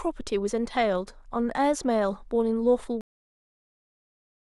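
A speech clip with a cut-off end: at 3.01 s the sound stops mid-sound and drops straight to digital silence, no decay, because the final buffers never got written out.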